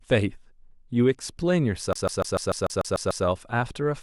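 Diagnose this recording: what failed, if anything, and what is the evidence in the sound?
The failure is at the playback stage, a CD stuck on one turn. From 1.93 s to 3.26 s the speech locks into a 147 ms segment that repeats nine times, each jump marked by a brief mute. A scratch knocks the laser back one track per revolution, so the loop is exactly even and identical every pass. Network packet concealment would instead smear or fade repeated fragments irregularly rather than cycle one fixed slice.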